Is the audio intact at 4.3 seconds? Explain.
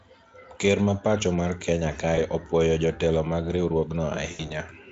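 No. From 4.31 to 4.52 s, about 80 ms of lost packets were concealed by the speech codec, extrapolating the last pitch and filter, so the sound smears into a fading buzzy tone or coloured noise.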